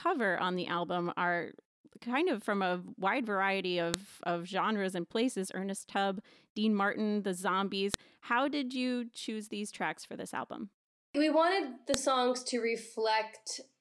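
Sharp, loud clicks snap through this speech clip at 3.94, 7.94 and 11.94 seconds, one every 4 seconds. This is a file header played as audio: the clip was joined from 4-second WAV pieces whose header bytes were left in and rendered as samples.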